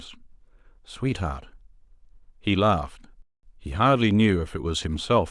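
At 3.22 s the speech halts for about 0.21 s in a playback stall, likely from the player starving of data; unlike a brief dropout click, it's a clean, noticeable silence.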